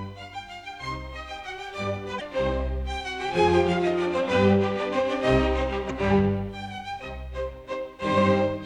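A short glitch breaks through the sound from 2.17 to 2.21 s, and a second one, also about 40 ms long, follows from 5.87 to 5.91 s. Both come from damaged data in a compressed stream. At each point some of the encoded bytes were corrupted, so the decoder misread the affected frames and lost its place. It then hunted for the next valid frame header before normal decoding could continue, producing that brief glitch.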